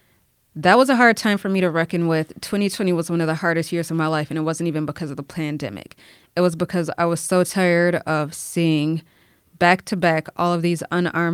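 Listening to the speech recording, nothing stood out as a technical problem at any point.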